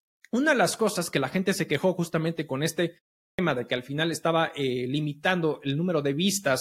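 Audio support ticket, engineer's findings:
Clipped start after a pause at 3.32 s: after the 0.41 s gap following "quejó justamente con este", onset swallowed, about 66 ms gone, resumes abruptly at "de que al final". Output device dozing in silence, slow to wake and relock.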